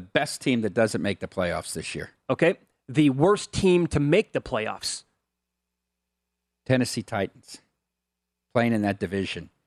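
Nothing stood out on listening to this speech recording.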